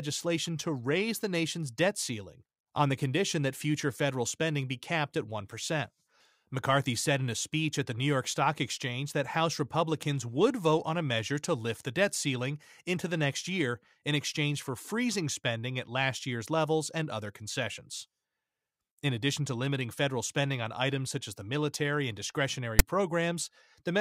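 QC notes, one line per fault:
22.79 s, file tags played as audio: right after "the military and discretionary" a short, hard-edged loud rasping snap cuts in, lopsided in character rather than a centred hiss. A block of text metadata from the file's tag area has been decoded as if it were sample data. Because text characters are byte values clustered in a narrow positive range, the waveform sits offset to one side, giving that harsh rasp instead of even white noise.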